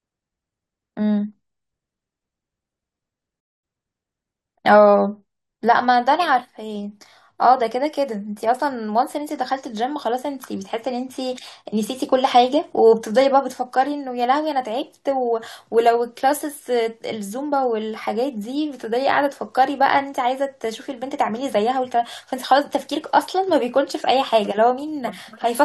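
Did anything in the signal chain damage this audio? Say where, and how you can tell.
Yes. At 3.40 s the speech drops to silence for about 0.23 s and picks up at 3.64 s exactly where it broke off, with nothing missing. That is a rebuffering stall at the playback stage: the player exhausted its downloaded audio and waited for more, adding roughly 233 ms.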